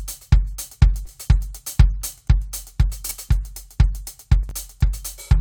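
Short concealed packet loss at 1.05 to 1.09 s: about 20 ms of the music failed to reach the decoder in time, and the receiver covered the gap by extending the preceding sound, repeating its pitch where it was tonal and substituting shaped noise where it was not. It filled roughly 12 ms this way, then crossfaded back into the real signal. The result is a brief smear or wobble in the music.

Chunks out of order at 3.05 to 3.11 s and again at 4.43 to 4.51 s: in each case a 20 ms block of audio was delivered late and played after material that should have followed it, two chunks behind at 3.05 s and three behind at 4.43 s. No audio is lost, but the sequence is scrambled, with three hard joins each time. The music stumbles in a short jumbled moment, and the second instance is longer.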